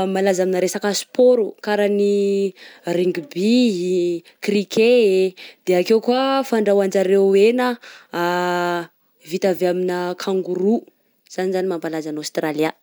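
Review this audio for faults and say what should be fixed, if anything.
Nothing stood out on listening to the recording, so there is nothing here that needs fixing.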